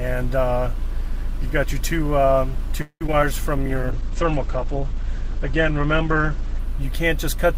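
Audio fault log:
2.81–3.27 s, repeated packet loss (robotic sound): Five holes open in under half a second. The longest lasts 194 ms. Each is patched by stretching the last sound forward, covering about 212 ms in all, nearly half the stretch. Another 80 ms is simply missing. The patches repeat the same waveform, so the audio turns choppy, with pieces missing between the gaps.
3.33–4.81 s, jitter buffer slow-down: Right after the losses, the receiver rebuilds its reserve. It repeats single pitch periods and bits of pauses, adding 62 ms over this span. Playback drops to 96% speed while the pitch stays put. Sounds are slightly drawn out.
3.69–6.67 s, call bitrate drop: The bitrate falls from 48 kbps to 10 kbps and stays at the bottom for about 2.9 s. With so few bits, coding becomes coarse. The top of the band is cut from 20 kHz down to 8 kHz. The audio turns muffled and somewhat watery, losing its crisp highs until the rate recovers near 6.7 s.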